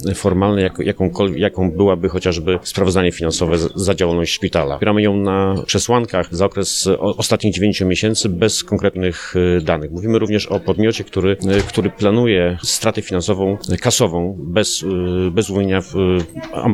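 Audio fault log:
No fault can be heard anywhere in this clip. Nothing in the audio calls for an entry in this log.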